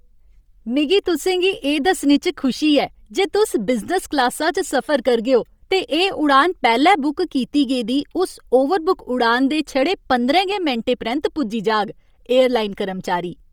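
Throughout, the speech carries a heavy breathy, grainy edge with noise-filled upper bands, likely Bluetooth LC3 compression at a low bitrate near 32 kbps.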